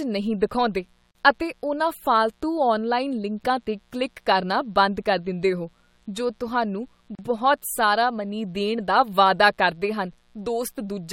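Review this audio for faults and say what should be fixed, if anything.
A steady, raspy mains buzz runs under the speech for the whole clip, about 40 dB below it. Switching spikes twice per 60 Hz cycle produce harmonics from 60 Hz up into the kHz range. Prevent it by grounding and shielding properly and keeping dimmers and rectifiers off the audio path.

There are two gaps at joins of encoded pieces: silences from 1.11 to 1.15 s (about 40 ms) and from 7.15 to 7.19 s (about 37 ms), about 6 s apart. Each marks a join between separately encoded segments. The encoder's start-up delay and the padded last frame were left in, so the speech cuts out and resumes where it stopped. Prevent it by encoding continuously or trimming encoder delay and padding before joining.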